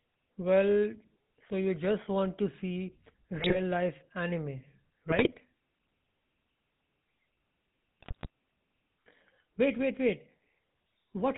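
The whole clip has passed through the GSM full-rate codec, which rebuilds speech from a vocal-tract model driven by a sparse, regularly spaced pulse train and discards everything above 4 kHz. The coding damage is plainly audible: the speech is band-limited and dull at the top, with a buzzy, gravelly roughness, a texture that fits the 13 kbps full-rate codec.

GSM bit errors strike three times, from 3.34 to 3.60 s, 5.10 to 5.38 s, and 8.00 to 8.27 s. In each burst, corrupted bits reached the decoder, scrambling the filter, pitch and gain parameters of several consecutive frames. The spectrum warps and the level jumps from frame to frame, so the speech briefly breaks into squawks, pops and gargling for roughly a quarter of a second each time.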